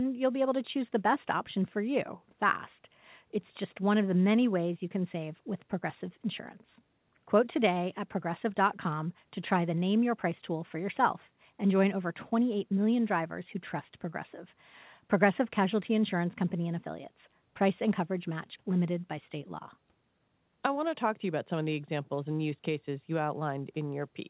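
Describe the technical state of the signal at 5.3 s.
At 5.3 s the speech is intact, with no fault, and what can be heard is the band limit of the call path, with nothing above 4 kHz as fits a G.711 mu-law codec at 64 kbps.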